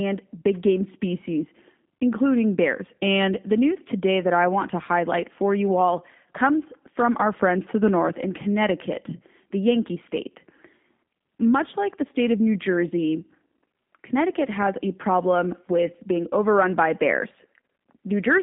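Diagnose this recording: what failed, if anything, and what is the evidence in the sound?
Throughout, the speech sounds rough and synthetic, with nothing above 3.7 kHz. This is a codec-stage fault: G.729 coding rebuilds the speech from a vocal-tract filter and sparse pulses.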